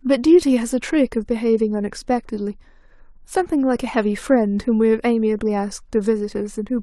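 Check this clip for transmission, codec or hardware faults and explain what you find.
I can hear no faults anywhere in this speech.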